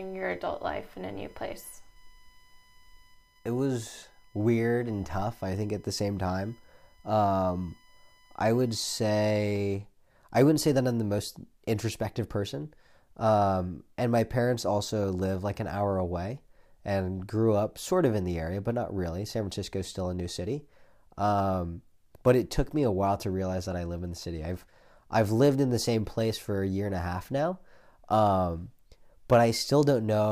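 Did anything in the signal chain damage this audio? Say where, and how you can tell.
Yes: USB whine from 0 to 9.4 s, a steady 1 kHz tone strongest at 2 kHz, well below the speech, where USB frame current leaks into the analogue power or ground.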